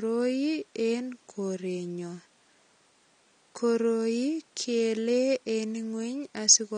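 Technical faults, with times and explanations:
Throughout, AAC compression: the speech was likely squeezed through a low-bitrate AAC-LC encoder, consistent with roughly 32 kbps, which drops the top of the spectrum and leaves gaps between bands, so the sound is plainly dulled and smeared, with a fizzy, warbling edge on sibilants.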